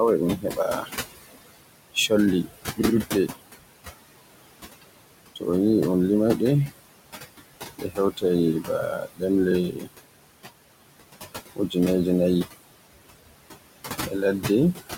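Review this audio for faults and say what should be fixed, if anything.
Noise suppressor artifacts run through the whole clip. The room noise sits only about 11 dB below the speech, and the suppressor pulls it down by about 20 dB in the gaps, then lets it back up under the speech. The background therefore pumps frame by frame. A gentler reduction depth or a better noise estimate would keep the background steadier.

Speech cut by the noise suppressor occurs at 0.37–0.91 s, 5.36–5.47 s, 7.78–8.24 s, 8.62–9.22 s, 9.7–9.89 s, 11.56–11.76 s and 14.06–14.49 s. Low-level speech was classed as noise and attenuated by about 9 to 21 dB, deepest at 8.62 s, so short stretches within each span sound swallowed. Protecting speech-probable bands or capping attenuation during detected speech would prevent this.

A repeated buffer occurs at 2.82–2.94 s. A roughly 43 ms chunk plays three extra times with hard joins, producing an audible stutter. 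The length fits a 2048-sample playback buffer that was replayed when new audio arrived late. Larger buffering headroom or a higher-priority audio thread would stop the underrun.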